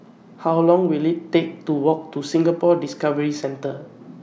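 No technical faults can be heard anywhere in this recording. The speech comes through steadily from the first moment to the last.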